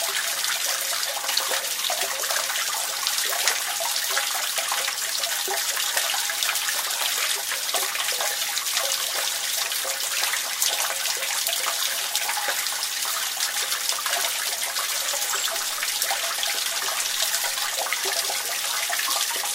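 No technical faults are audible anywhere in this recording of sounds.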